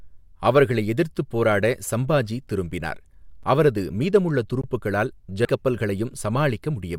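At 3.43 s and again from 4.61 to 4.64 s the speech drops into a block of digital silence, about 6 ms and 21 ms long. The sound cuts out and back with no fade. The first is heard as a tick, the second as a brief hole. The 21 ms gap fits a 1024-sample buffer the program did not fill in time.

At 5.44 s the speech jumps abruptly forward with a small blip, as a stretch of the programme is missing. This is likely a stream segment skipped, where one segment failed to load and playback continued with the next.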